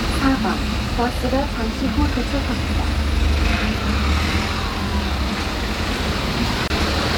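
At 6.68 to 6.70 s there is a gap at a join of encoded pieces. The audio was encoded as separate sections and then spliced end to end without removing the encoder's start-up delay and last-frame padding, so that padding survives as silence. The result is a hole of about 25 ms in otherwise continuous sound, with its edges softened by the codec, after which the sound resumes exactly where it broke off.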